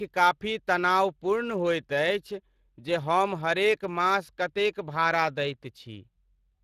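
From start to finish the speech carries Speex codec damage, plainly audible as a hoarse, grainy roughness on voiced sounds. This CELP coder rebuilds each stretch from a predicted spectral shape plus a coarse excitation, and the buzz-like graininess fits a rate of about 22 kbps, too few bits to model that excitation cleanly. Nothing sounds above 15.2 kHz. Transform codecs such as MP3 smear and swirl around transients, but this roughness stays tied to the voicing itself.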